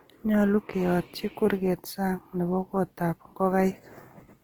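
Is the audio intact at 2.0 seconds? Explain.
No. At 2.0 seconds, as throughout the clip, the speech sounds grainy and rough, with a noisy, hissy texture over the tones instead of clean harmonics, though the top end still reaches about 20.2 kHz. This is likely Opus compression in its music (CELT) mode. Short of bits, the encoder keeps each band's energy but fills the detail with folded copies of lower bands or noise, which fits a low rate near 16 kbps.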